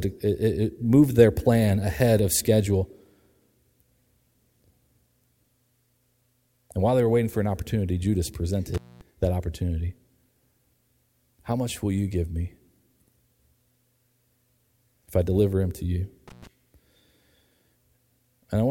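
An intermittent contact, a loose connection briefly opening, cuts the speech with edge crackle at 8.74–9.01 s (about 230 ms), just before "that opportunity", and at 16.28–16.47 s (about 110 ms), right after "deliver him to you".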